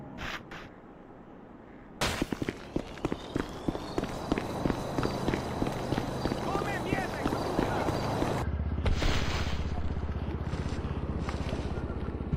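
No technical faults can be heard anywhere in the clip. The audio runs without any break, glitch or other disturbance that would need explaining.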